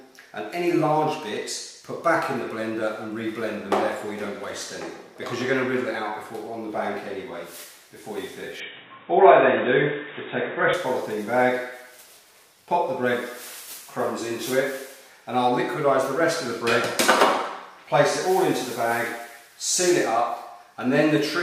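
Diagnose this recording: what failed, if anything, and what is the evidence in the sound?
Input switched to a poorer device, from 8.60 to 10.74 s, at the driver or device-routing stage. In that span nothing above 3.8 kHz remains, the level shifts by around 5 dB, and a new noise floor appears roughly 30 dB below the signal. The band and the noise return to normal after 10.74 s, with no gap at either switch. The cause is likely the system rerouting capture to another microphone or a headset's call profile, whose narrower band, gain and noise then took over.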